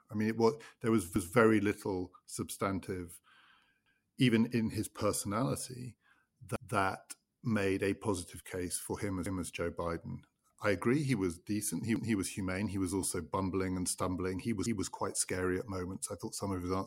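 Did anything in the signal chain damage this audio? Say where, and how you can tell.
Yes, overlapping chunks at the buffering stage: each 2.5 s chunk replays 200 ms, stuttering at 1.16, 3.86, 6.56, 9.26, 11.96 and 14.66 s. The waveform shows a duplicated segment at each join.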